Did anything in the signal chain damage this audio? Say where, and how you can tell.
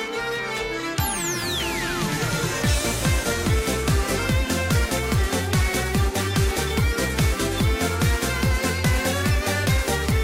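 No, nothing in the chain damaged this audio.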